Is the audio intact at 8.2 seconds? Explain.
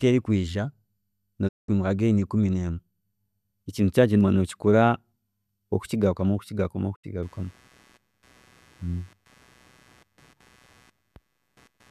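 No. Computer activity noise runs from 7.23 s to the end: processor or peripheral load disturbs the shared audio ground, adding a faint buzz pulsing roughly 150 times a second, well below the speech.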